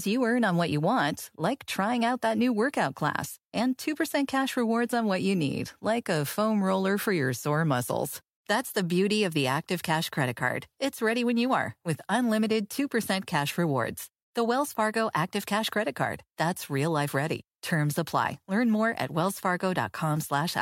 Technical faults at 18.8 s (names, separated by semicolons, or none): none